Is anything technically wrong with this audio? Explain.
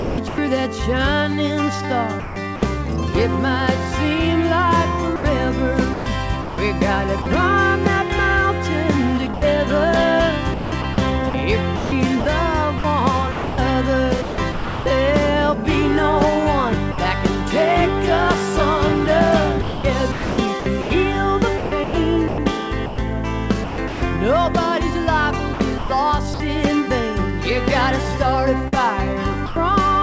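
Yes. The sound is chopped by the voice detector: holes filled with a steady synthetic hiss at 0.00–0.38, 2.20–2.62, 5.16–7.26, 9.34–14.86, 19.62–24.02, 25.54–26.40 and 28.68–29.56 s. The fills run from about 0.14 s up to 1.4 s. The likely cause is the sender's voice detector repeatedly treating real sound as background and switching transmission off.

Separately, the sound is dropped by the voice detector at 16.92 s for 60 ms. A brief patch of comfort noise replaces it before the sound returns. This is likely a single case of the detector mistaking quiet sound for background and pausing.

Nothing is audible above 8 kHz, which fits a G.722 call path at 64 kbps.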